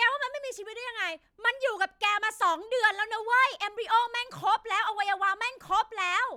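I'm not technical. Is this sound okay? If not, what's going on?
Yes, nothing in the recording points to a technical problem with how the sound was captured or carried.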